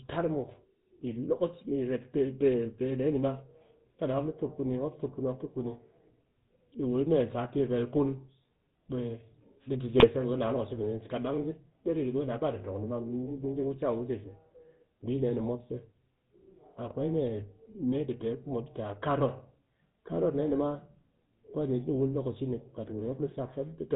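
Speech runs the whole way through the GSM full-rate codec, audible as a buzzy, gravelly roughness with nothing above 4 kHz, which fits the old 13 kbps GSM voice channel. What separates it from a plain 4 kHz low-pass or a narrowband G.711 line is the grainy, pulse-driven texture laid over the voice, where a simple filter would only dull it. GSM bit errors break in twice, from 9.98 to 10.05 s and from 16.87 to 16.92 s. Corrupted filter, pitch or gain values in the decoder make the voice squawk, gargle or jump in level for a moment, consistent with only two or three frames being hit each time. Unlike packet loss, which leaves gaps or smoothed-over concealment, these bursts put out loud, wrong sound, distorted rather than missing.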